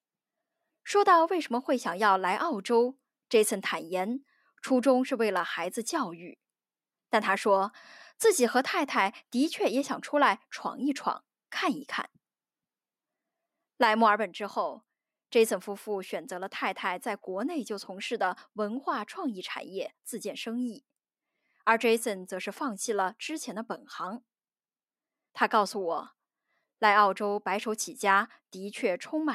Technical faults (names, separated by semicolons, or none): none